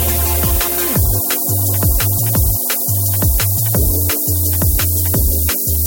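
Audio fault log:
throughout: low bit depth with noise shaping. Only 3 bits, with the rounding error pushed upward, so a thin hiss about as loud as the sound itself climbs toward the top.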